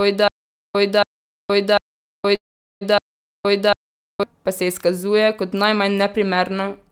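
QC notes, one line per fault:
0.00–4.23 s, stutter with silent gaps: the clip opens already caught in the loop, with a short burst of about 0.28 s of the same sound returning every 0.75 s, each time followed by roughly 0.47 s of dead digital silence, four repeats in all. This is most likely a playback or stream stall where each retry replays the last fragment and then runs dry, so the sound that belonged in those gaps is gone.
2.35–2.83 s, call audio freeze: the sound stops moving forward and the last moment is drawn out into a fading buzz that sinks to silence for about 0.41 s of the roughly 0.46 s hold. It then picks up exactly where it left off, so nothing is lost; the rest of the clip is simply pushed about 0.46 s later. The likely cause is packets held up in transit, leaving the jitter buffer empty.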